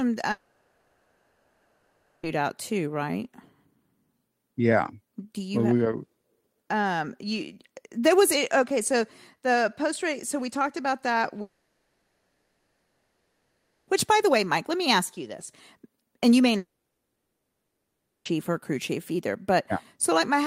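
Three long network dropouts, likely from lost packets, break this speech: 0.31–2.26 s, ending just before "out too right"; 11.41–13.90 s, after "we talked about that"; and 16.57–18.28 s, between "and you may" and "or a crew chief". Each time the last sound smears into a fading buzz, which in the third gives way to about 1.5 s of silence. Unlike a stall, the speech picks up further on, with seconds missing.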